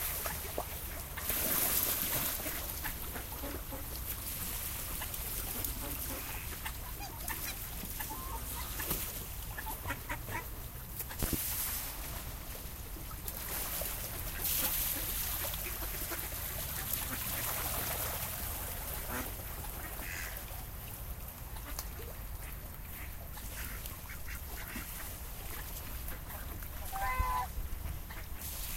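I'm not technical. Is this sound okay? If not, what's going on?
No. There is a loud pop at about 11.23 seconds. It is really two pops in quick succession, over by about 11.36 seconds. They peak well above the sound around them. The sound itself keeps going underneath. The likely cause is a sudden electrical jolt getting into the signal, from a plug, a switch, static or a glitch in the audio hardware's software. The equipment after that point shapes the jolt into a sharp pop.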